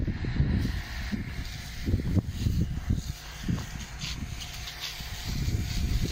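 Mains buzz runs from start to finish, a steady raspy drone sitting about 20 dB beneath the sound. Sharp switching spikes from the 50 Hz supply leak in twice per cycle, so the buzz repeats at 100 Hz with harmonics stretching into several kHz.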